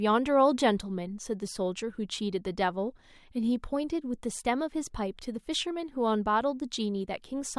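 No technical faults can be heard anywhere in this speech recording. There is no moment in it that stands out as having gone wrong.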